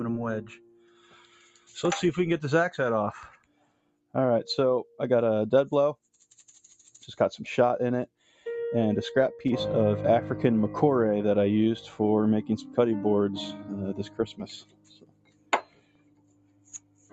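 A speech-style noise suppressor was left running on this audio. It treats held sound and decay as noise, so the level pumps and thins, swinging by around 20 dB. The suppressor cuts the sound hardest from 0.41 to 1.75 s, 3.32 to 4.15 s, 8.07 to 8.46 s and 14.0 s to the end. The dips reach about 17 to 18 dB.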